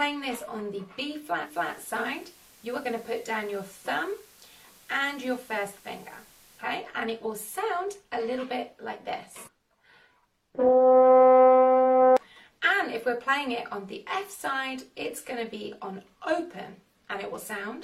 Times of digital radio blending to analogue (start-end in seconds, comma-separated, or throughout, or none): 1.41-6.69